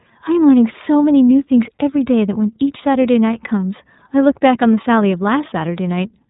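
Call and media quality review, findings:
iLBC codec, throughout. Band-limited, nothing above 3.8 kHz; speech plainly rough and synthetic. Excitation coded independently per frame, a texture that fits 30 ms frames at around 13.3 kbps. Narrowband VoIP leg, probably a gateway or trunk transcode.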